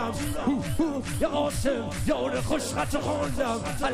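No technical faults are audible.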